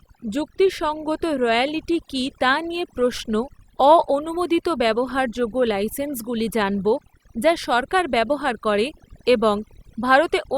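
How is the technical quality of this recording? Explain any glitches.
The recording suffers from overdone noise removal throughout. Bands near the noise floor are gated off, leaving near-silent gaps with twinkling specks, and quiet parts of the voice are removed with them; a spectrogram shows scattered isolated dots between sparse, eroded harmonics.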